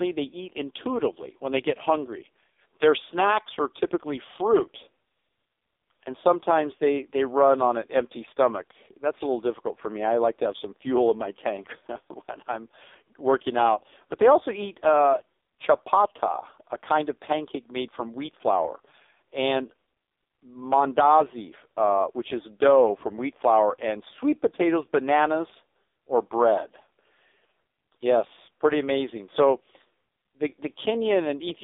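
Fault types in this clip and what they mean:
AMR narrowband mobile codec: the speech is rebuilt from a vocal-tract model fed sparse pulses, and the heavy buzzy, synthetic quality fits the 5.15 kbps mode. A spectrogram shows energy only between 300 Hz and 3.6 kHz, with nothing above 3.7 kHz.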